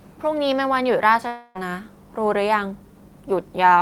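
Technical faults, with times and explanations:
1.27–1.57 s, long network dropout: the sound turns into a buzzy, fading continuation for about 0.28 s, never reaching true silence, then resumes with that much audio skipped. This is likely concealed packet loss; unlike a brief glitch, the fill audibly decays.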